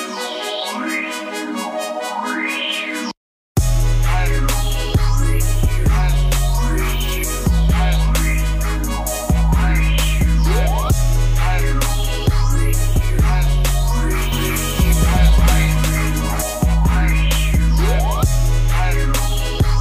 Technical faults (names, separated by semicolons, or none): doubled audio track